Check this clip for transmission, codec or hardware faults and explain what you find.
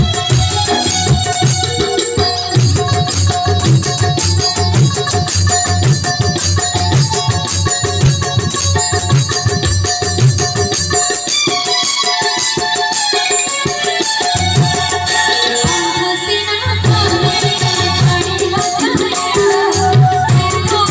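Nothing wrong can be heard anywhere in this recording.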